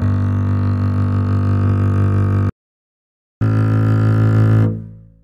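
At 2.49 s the player most likely ran dry of buffered data, or its output thread was held up, so nothing reached the output. This is a playback stall: the music cuts off in mid-flow and silence holds for about 0.91 s, until 3.41 s.

From 3.41 s to 5.24 s the player works through its backlog by resampling the queued audio to run 1.1 times faster. This is catch-up at higher speed. Because resampling changes speed and pitch together, the music rushes forward and sits sharp by roughly a semitone and a half for those final seconds.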